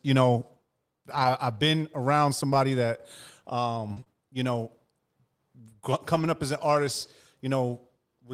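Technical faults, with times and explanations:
1.11–4.15 s, scattered short gaps: about three brief dropouts, the longest around 30 ms and roughly 70 ms in total, each patched by extending the preceding sound. They are heard as small ticks and smears in the speech leading into "you know".
6.15–6.29 s, lost packet rebuilt from error correction: about 80 ms of speech comes from low-bitrate redundant copies carried in the following packets, which suggests several separate losses. There is no gap, but the passage just before "up as an artist" sounds rougher and noisier.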